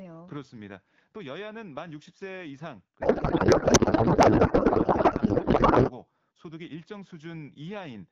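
From 3.01 s to 5.92 s there is a codec payload misread. AMR-WB frames packed in octet-aligned form are being unpacked as bandwidth-efficient, so every field lands in the wrong place. The speech gives way to garbled noise and warble that barely tracks it.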